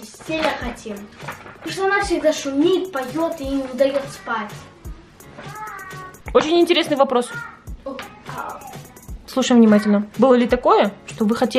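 No dropouts, clicks, distortion or level jumps turn up anywhere in the recording.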